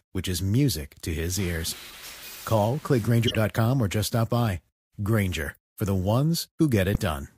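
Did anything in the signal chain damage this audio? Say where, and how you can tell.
Yes. Three brief chirp-like bursts of misplaced noise cut into the speech at 1.90 to 1.97 s, 3.27 to 3.35 s and 6.95 s. The first is fairly faint, and the later two come through much louder. These are corrupt frames decoded at the codec stage. Flipped bits in the compressed stream scrambled gains and spectral codes, and the decoder played those frames anyway. Each burst spans only a few frames, which is why each lasts under a tenth of a second.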